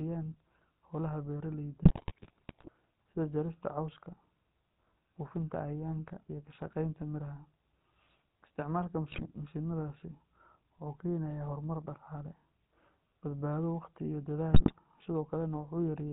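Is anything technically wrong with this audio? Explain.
Yes, the speech runs through the GSM full-rate codec from start to finish. The codec rebuilds the voice from a vocal-tract model driven by sparse, regular pulses, so the sound is buzzy and gravelly, consistent with the 13 kbps full-rate scheme. On a spectrogram, nothing appears above 4 kHz.

GSM bit errors occur at 1.82–2.69 s, 9.12–9.32 s and 14.52–14.73 s. Corrupted filter, pitch and gain values make the decoder produce squawks, pops and gargling. The waveform shows sudden level spikes, and the spectrogram shows smeared, misplaced formant bands.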